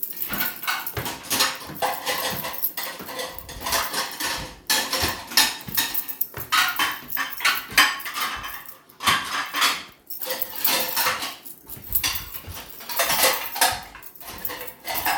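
No technical faults can be heard anywhere in this recording of sounds.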